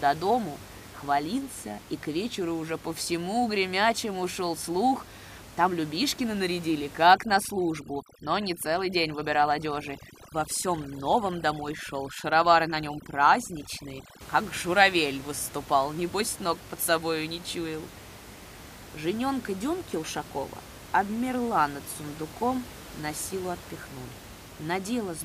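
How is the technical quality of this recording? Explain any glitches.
The quality suffers from one stretch of processing trouble, with room noise sitting about 18 dB below the speech. From 7.07 to 14.21 s, just before "как журавель выступал небось", overdone noise removal sets in: the reducer cuts frequency bands near its noise estimate too hard, taking quiet speech detail with them, so the background drops and breaks up into twinkling specks.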